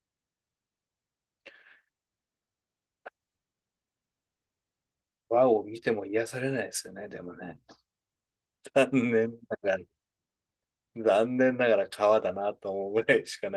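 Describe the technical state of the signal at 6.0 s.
At 6.0 s the speech is intact, with no dropout, click or other fault, only the light coloration of its Opus voice compression.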